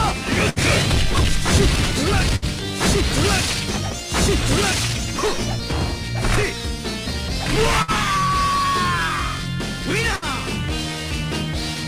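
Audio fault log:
0.49–0.59 s, 2.36–2.45 s, 7.82–7.91 s, 10.16–10.25 s: burst of packet loss. In each, about 60 ms of sound never arrives. The receiver extends the last sound as a decaying buzz or hiss for about 60 ms, then resumes later on. On a spectrogram this appears as smeared, fading horizontal bands ending at an abrupt discontinuity. On the waveform it looks like a shrinking repeated cycle.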